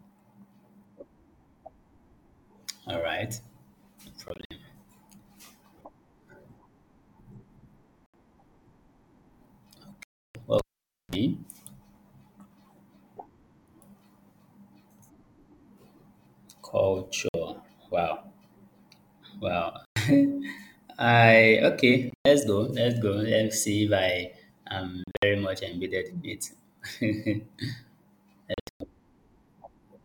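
Speech cuts out in short holes at 4.28, 8.06 and 10.03 s. The longest gap runs about 0.32 s. Some holes are broken into bursts. The speech resumes further on, as if it kept playing. This sounds like a Bluetooth dropout, likely from packets arriving too late. At 10.59 s comes the cable pulled and plugged in. A pop is followed by about 0.52 s of near silence and a 38 ms burst of 60 Hz mains buzz, and a second pop ends it at 11.15 s. More dropouts follow at 17.29, 19.85, 22.10, 25.04 and 28.54 s, each a gap of 56 to 224 ms.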